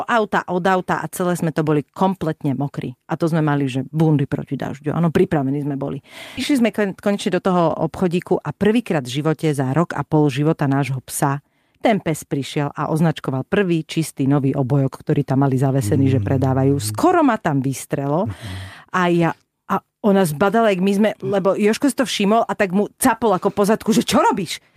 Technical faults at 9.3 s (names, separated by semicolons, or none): jitter buffer speed-up